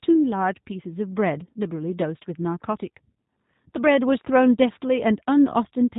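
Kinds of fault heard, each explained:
G.729 codec: low-rate speech coding rebuilds the voice from a filter, pitch predictor and sparse pulses, so it sounds slightly rough and synthetic, with nothing above 3.8 kHz, unlike plain band-limiting.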